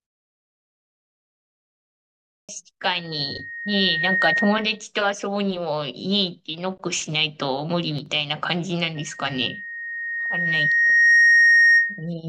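Right at the start, the speech comes in clipped after the opening silence. The first word lands at 2.36 s with its onset missing, roughly 0.13 s swallowed, through 2.49 s. That's the playback device dozing during the 2.36 s pause and not waking or relocking in time, so the sound begins abruptly, already mid-word.

From 2.99 s to 4.84 s there's a loudspeaker feedback squeal at 1.9 kHz. The mic is hearing the speaker it feeds, and at that one frequency the loop gain tops unity, so the tone feeds itself. You can hear it swell over about a second until it sits roughly 5 dB above the speech, then it stops.

Between 7.99 s and 8.06 s the level dips briefly by about 6 dB. That's the classic signature of one channel dropping out, likely one side of the stereo pair vanishing for a moment. In the mono sum, anything common to both sides drops by that 6 dB, and whatever lived only in the lost channel disappears.

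The feedback squeal returns at 8.95 s, again at 1.9 kHz, and this time it builds more slowly, over about two seconds. It climbs to roughly 10 dB above the speech and keeps howling through 12.10 s, which makes it the louder and longer of the two.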